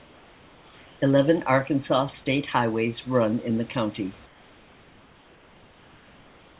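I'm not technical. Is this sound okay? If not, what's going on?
No. During the quiet stretches, the call system most likely stopped sending the real background and had the receiving end make up a stand-in hiss, known as comfort noise in place of the background. It happens from the start to 1.02 s, and again from 4.26 s, right after "run in the county", to the end. In those gaps the natural room sound turns into a smooth, featureless hiss, slightly quieter than the real background.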